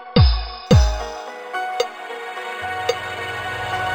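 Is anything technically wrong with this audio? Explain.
Yes. From 0.67 s to the end, the audio shows imaging from linear upsampling. The sample rate was raised by joining existing samples with straight lines, which fits a conversion from about 11 kHz up to 48 kHz. That interpolation filters poorly, so content above roughly 5.5 kHz is dulled, and a mirrored copy of the spectrum lands between about 5.5 and 11 kHz, around 25 dB below the signal. It comes through as a faint metallic shimmer on the brightest parts of the sound.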